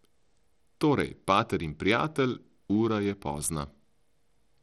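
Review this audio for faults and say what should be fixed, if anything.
The speech carries plainly audible codec damage from start to finish. The treble is thin and unsteady, and a gritty, grainy noise rides on the sound. The likely cause is Bluetooth SBC compression at a small bit pool. SBC splits the signal into a few wide bands and spreads bits without a hearing model. The weak top bands starve and the rest are quantised coarsely. The damage fits a low rate near 80 kbps. To prevent it, record over a wired path or raise the SBC bit pool.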